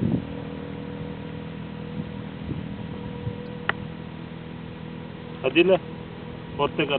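A brief glitch at 3.46 s marks a corrupt frame decoded. Bit errors reached a compressed frame, and the decoder played it anyway. Misread gains and codes put energy at wrong frequencies across a couple of frames. The resulting error is quiet, peaking around -40 dBFS.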